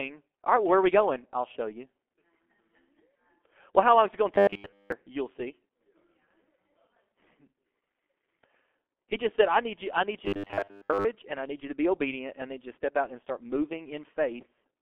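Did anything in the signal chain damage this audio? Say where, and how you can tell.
Yes. At the codec stage, the speech passed through G.723.1 at 6.3 kbit/s for the whole clip. Nothing survives above 3.5 kHz, and the line band runs roughly 250 Hz to 3.4 kHz. Its coarse, slow-updating voice model leaves the speech muffled and hoarse, with smeared consonants.

At the driver or buffer stage, audio was likely delivered too late, so the same short block was replayed while most of the real signal was dropped. This happened from 4.34 to 4.92 s and from 10.26 to 11.06 s. The repeats impose a rigid, metallic 100 Hz buzz, which fits a 10 ms block being looped.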